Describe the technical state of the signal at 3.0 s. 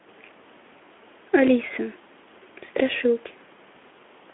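At 3.0 s the signal is intact, with the speech passing through its Speex telephone-band path without any fault at that moment.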